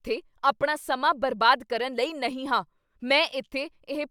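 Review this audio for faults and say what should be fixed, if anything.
Nothing here needs fixing, since no technical faults turn up anywhere in this speech recording.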